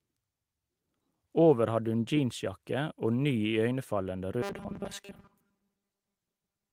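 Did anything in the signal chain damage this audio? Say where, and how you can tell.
Yes. From 4.42 s to the end at 6.73 s, the speech becomes a rigid, metallic buzz pinned near 200 Hz. This is robotic sound from repeated short buffers, likely at the driver or buffer stage. A 5 ms chunk keeps looping and replaces most of the real audio.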